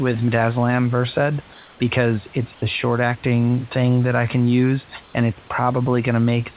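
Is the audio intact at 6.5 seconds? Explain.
Yes, the audio is intact at 6.5 seconds, with nothing there beyond the narrowband call path's usual coding noise and the room noise about 28 dB below the speech.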